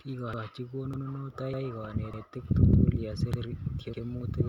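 Speech, with overlapping chunks: every join replays the last 100 ms, so a short stutter lands at 0.34, 0.94, 1.54, 2.14, 2.74, 3.34 and 3.94 s. Each 0.5 s chunk starts before the previous one finished, giving a steady repeating hiccup.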